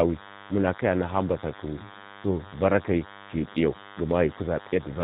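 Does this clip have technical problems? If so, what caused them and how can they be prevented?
Yes. DECT cordless phone buzz runs throughout: a thin, steady 100 Hz buzz with many harmonics, about 20 dB below the speech, comes from rectified 10 ms radio bursts from a nearby DECT handset or base. To prevent it, move DECT equipment away from the microphone and audio cabling and use shielded leads.

G.729 codec damage is also plainly audible throughout. The speech has no content above 4 kHz and sounds rough and synthetic, as expected from this model-based coder at 8 kbit/s. To prevent it, record locally or choose a wideband, higher-bitrate codec for the call path.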